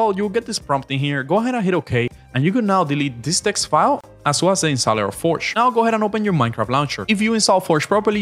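At 4.01 to 4.04 s a gap at a join of encoded pieces drops about 31 ms of silence into continuous sound, left by untrimmed encoder delay and last-frame padding. It shows as a flat waveform and a blank vertical strip, edges smeared, before sound resumes seamlessly.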